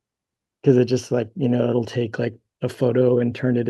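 Speech, carrying clock drift between sender and receiver throughout: the sending clock runs about 2 percent slow relative to the receiver, so the jitter buffer keeps draining and the receiver has to fill the gap. On a waveform the slippage itself is invisible from moment to moment, but measuring against the original timeline would show the audio falling steadily behind, with the playout stretched to roughly 98 percent speed.

Those gaps are patched by repeated timing corrections from 0.06 s to 3.19 s. Short pieces are repeated again and again, always lengthening, never cutting, and unevenly spaced, adding about 70 ms overall. Each is heard, if at all, as a slight hiccup or a momentary drag in tempo. On a spectrogram they show as small duplicated slices, where a short stretch of harmonic pattern reappears, sometimes with a faint vertical seam at the splice.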